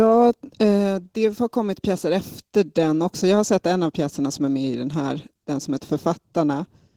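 A speech recording with Opus voice compression throughout, plainly audible as a hoarse, slightly robotic tone consistent with a hybrid-mode bitrate around 16 kbps. On a spectrogram, the band below 8 kHz looks smeared and coarsely coded, and the sparse content above it is patchy, in 20 ms blocks.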